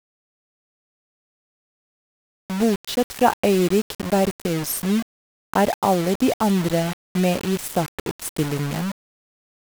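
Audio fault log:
throughout, low bit depth without dither: the speech carries a coarse, grainy distortion that rises and falls with the voice, and quiet passages sputter or drop to silence. This points to a signal likely rounded to only about 5 bits with no dither, leaving error roughly 15 dB under the speech. Unlike dithered noise, which stays as a steady hiss even in pauses, this grit tracks the signal and vanishes in silence.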